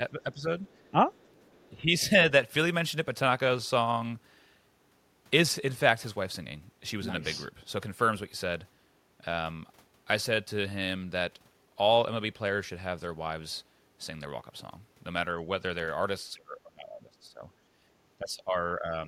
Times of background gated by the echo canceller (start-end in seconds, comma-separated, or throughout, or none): 17.72-17.78